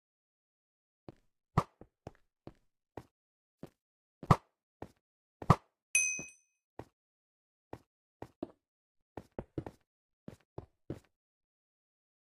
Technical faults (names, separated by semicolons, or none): none